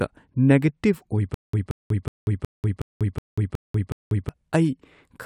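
From 1.34 s to 4.29 s the speech breaks into a stutter with silent gaps: a fragment of about 177 ms plays, then about 191 ms of dead silence, repeating eight times at a steady 368 ms period. This is likely a stalled stream replaying its last buffered chunk on each retry. On a waveform it shows as identical blocks separated by flat silent lines; a spectrogram shows the same pattern stamped repeatedly between blank vertical bands.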